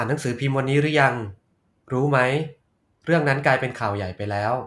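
No technical faults are audible.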